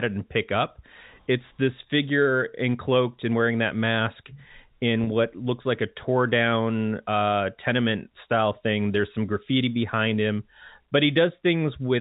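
At 5.04 to 5.07 s, a packet loss with pitch repetition cuts about 30 ms from the speech, which fits one lost packet. The last pitch period is repeated, giving a brief held, buzzy sound. The spectrogram shows frozen, evenly spaced harmonics, and the waveform shows identical repeating cycles.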